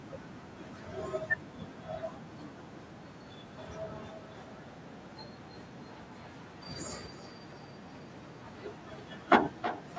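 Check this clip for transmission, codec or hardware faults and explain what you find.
One fault is present: a feedback echo between two devices, running from 3.46 s to the end. A second device in the room replays this call's audio, and the microphone picks it up again, beyond the reach of the local echo canceller. Each phrase returns roughly every third of a second, peaking at about 11 dB below the direct speech.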